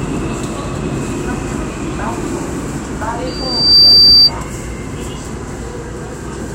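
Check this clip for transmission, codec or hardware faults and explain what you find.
One hardware fault: loudspeaker feedback squeal, 3.27 to 4.31 s. A mic-to-speaker loop exceeds unity gain at 4.7 kHz, swelling over half a second into a piercing tone about 15 dB above the sound. It shows as a single bright horizontal spectrogram line.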